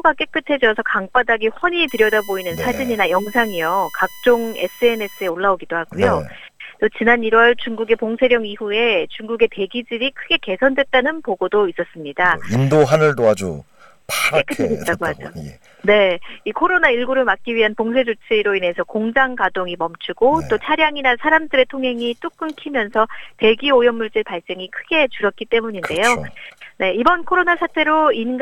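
USB whine runs from 1.88 s to 5.30 s: a steady, fixed-pitch tone built on 1 kHz, with its energy concentrated high up at the 15 kHz harmonic and sitting about 20 dB below the audio. The 1 kHz spacing matches the USB bus's 1 ms frame timing, whose pulsed current draw has leaked into the audio path through shared power or ground, so the interference appears as a harmonic series rather than noise.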